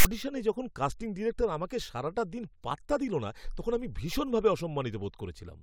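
From 0.00 to 0.06 s, before "যখন কাস্টিং ডিরেক্টর আমাকে", the file tags are played as audio: a text metadata block decoded as samples. The text bytes produce a loud, lopsided rasp, and the zero padding that follows drops to silence, giving a short hard-edged burst before the speech begins.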